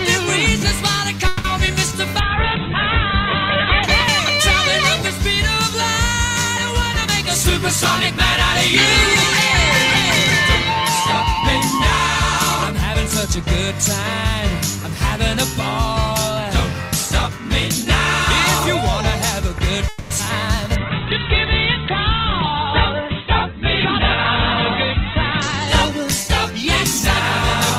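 Network delay on this call of unspecified audio content twice likely stalled delivery until the jitter buffer ran dry, producing a call audio freeze: at 1.27–1.46 s and again at 19.88–20.12 s the receiver stretches the last sound into a fading buzz or hiss for about 0.17 s and then 0.22 s. Playback then resumes where it stopped, inserting a gap with nothing lost. Short concealed packet loss occurs at 1.66 s, 20.25 s and 20.28 s, where 20 ms, 40 ms and 20 ms of audio never reached the decoder. The receiver patched each hole by extending the preceding sound and blending back, heard as a brief smear or wobble. A call bitrate drop comes from the bandwidth estimate collapsing, which fits a fall from about 48 kbps to 7 kbps at 2.21–3.91 s and to 8 kbps at 20.77–27.26 s. The coarser coding and a top end cut from 20 kHz to 4 kHz leave the sound rough and muffled, clearing when the rate recovers. 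A jitter buffer speed-up trims excess stored audio by removing short pitch-period slices. At 6.96–13.72 s this runs at 102% speed, shedding roughly 0.15 s. At 21.99–24.00 s it runs at 108%, again shedding roughly 0.15 s, and there it sounds hurried at unchanged pitch. A skip ahead at 20.18 s drops around 70 ms of stretch while later audio was already queued, so playback jumps forward with the two sides joined almost directly. Finally, a jitter buffer slow-down at 20.64–21.01 s rebuilds a reserve by repeating pitch periods, adding 51 ms so the audio plays at 88% speed with drawn-out sounds at the same pitch.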